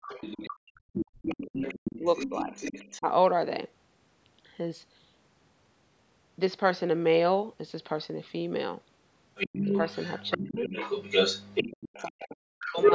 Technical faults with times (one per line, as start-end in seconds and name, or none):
0.02-2.98 other side's voice leaking through
0.55-3.08 speech suppressed in double talk
9.35-12.94 other side's voice leaking through
9.46-9.69 speech suppressed in double talk
10.37-10.70 speech suppressed in double talk
11.70-12.79 speech suppressed in double talk